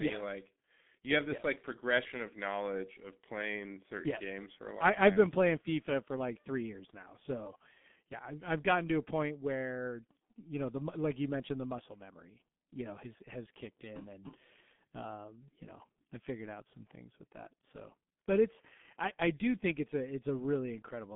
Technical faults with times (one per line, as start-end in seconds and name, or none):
0.00-21.15 G.723.1 codec